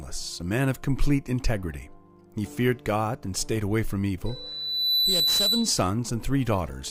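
A microphone picking up its own loudspeaker sets off loudspeaker feedback squeal from 4.26 to 5.89 s: a 4 kHz tone swells over roughly 0.7 s, peaking about 5 dB above the sound.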